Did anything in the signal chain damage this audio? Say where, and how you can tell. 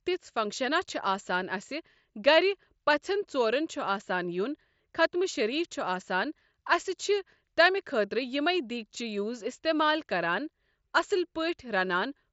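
No, nothing damaged this audio.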